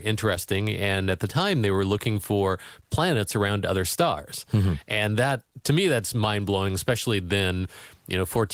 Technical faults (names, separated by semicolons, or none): none